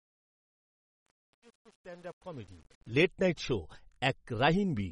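Truncation distortion on a fade runs from 0.0 to 2.95 s in this speech clip, worst between 0.0 and 2.86 s, ending just before "লেট নাইট শো". The fade was computed with too few bits and no dither, so near the bottom of its range the waveform collapses into a handful of square steps, and the quiet part turns gritty instead of smooth. The coarseness fits a gain stage holding only about 8 bits. MP3 compression colours the whole clip with plainly audible codec damage: a watery, swirly texture as weak frequency lines drop in and out between frames, with smeared onsets. Nothing is present above 11 kHz, matching an encoder's fixed treble cut. The likely cause is a low-bitrate encode, and the damage fits roughly 32 kbps.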